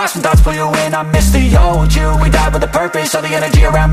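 Nothing in this clip stands out as a technical fault; it just runs along without any glitch worth pointing to.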